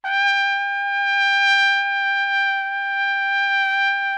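No technical faults can be heard anywhere in the recording of sounds; the signal stays intact and steady throughout.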